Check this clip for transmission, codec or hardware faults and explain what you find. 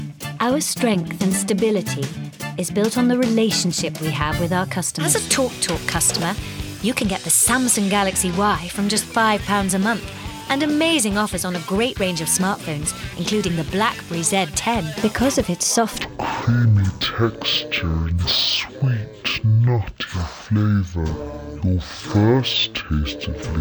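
One fault, near the end. From 16.02 s to the close, the sound drops to half speed and an octave lower: stereo read as mono, its interleaved left and right samples played back-to-back as one channel.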